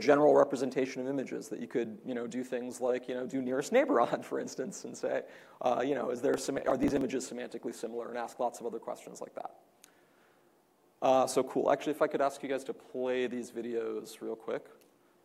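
From 6.34 to 7.01 s a gritty, tearing crackle rides on the sound. This is processor overload crackle. The processor kept missing buffer deadlines, around twenty over that stretch, and each miss left a tiny hard-edged skip. The spacing fits buffers of roughly 5 ms.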